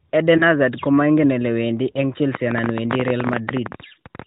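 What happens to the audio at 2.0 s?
Just before 2.0 s, from about 1.92 to 1.99 s, a single AMR speech frame is lost. The decoder fills the 20 ms gap by repeating the last good pitch and vocal tract settings at reduced gain, giving a brief dip or warble. The waveform shows a small amplitude sag, and the spectrogram shows a short stretch of flat, smeared harmonics below the 4 kHz narrowband ceiling.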